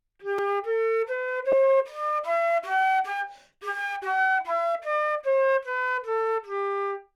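At 0.38 s there is a block of digital silence about 4 ms long. The output stopped and went straight to zeros with no fade, then returned just as abruptly. The two hard edges fall so close together that they merge into a single sharp tick.

At 1.52 s come lost LE Audio frames. The decoder covered the gap by repeating the last spectrum with randomised signs. The gap is about 10 ms, which fits a single lost frame. Any tonal content briefly blurs into a noisy smear.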